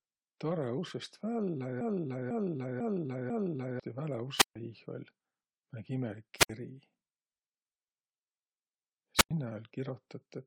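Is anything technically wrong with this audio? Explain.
Yes, there are two kinds of fault.

From 1.81 to 3.80 s there is a broken-record loop: a half-second fragment of speech repeats exactly four times, back to back. The likely cause is a stalled player or stream resending its last buffer. On a waveform, identical blocks tile end to end, and the spectrogram repeats the same pattern in stripes.

There are wireless microphone squelch dropouts at 4.37 to 4.56 s, 6.37 to 6.50 s and 9.16 to 9.31 s. In each, the fading FM signal brings a burst of hiss, and then the receiver mutes for 140, 66 and 98 ms respectively. The spectrogram shows broadband noise, then a blank gap.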